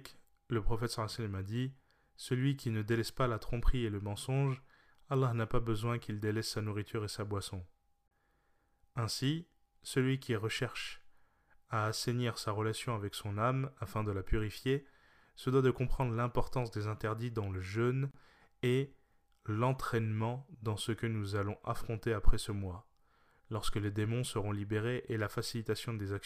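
At 8.08 s, right after "nourriture et sa boisson", the speech drops into a silence of about 33 ms, ending at 8.11 s. It is a gap at a join of encoded pieces. At 18.11 s it happens again, after "interdits dans le jeûne", lasting about 31 ms before "et l'entraînement dans ce". The gaps fall 10 s apart. Each piece was encoded on its own, and its start delay and end padding were left in at the joins. The edges are smeared by the codec, and the speech resumes where it stopped.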